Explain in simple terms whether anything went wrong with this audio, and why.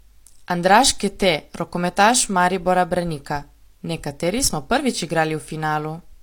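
Something did go wrong, and it runs through the whole clip: sample clock jitter. The clock that tells the converter when to measure the sound wobbles by a couple of millionths of a second, so each sample lands a touch early or late. Where the speech changes fastest, those timing slips turn into errors, which you hear as a faint hiss or grit riding on the louder, brighter sounds and disappearing in the pauses.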